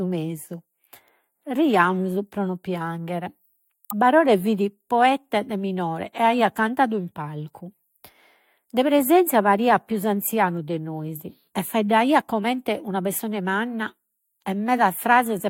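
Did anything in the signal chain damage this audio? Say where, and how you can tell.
Yes, at the codec. At 3.90 to 3.93 s the speech skips ahead, likely a broken MP3 bit reservoir, decoding another frame's borrowed bytes.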